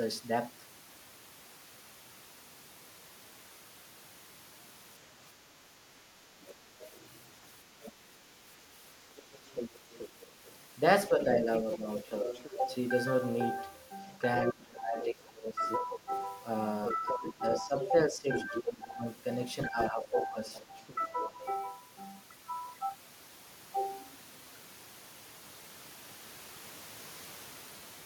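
At 6.16 to 6.2 s the speech dips briefly, a shallow drop of a few decibels, which is likely speech suppressed in double talk: the echo canceller seems unable to separate the talker from the loudspeaker echo and turns both down. From 6.41 to 7.92 s a faint second voice sits well below the speech, likely the other side's voice leaking through where the canceller left some far-end playback in the microphone signal. From 9.17 to 12.74 s that leak returns louder, about 10 dB under the speech. Within it, from 11.09 to 12.6 s, the talker drops by around 10 dB for about half a second in total, likely suppression again during overlap. The heaviest overlap begins at 14.08 s. The other side's voice leaking through rises to only about 5 dB below the speech and continues until 18.71 s. From 14.52 to 21.4 s the talker is pushed down by as much as about 20 dB, with roughly four seconds affected in pieces, likely the canceller clamping both voices. 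From 19.83 to 21.29 s a quieter leak, about 15 dB down, remains audible.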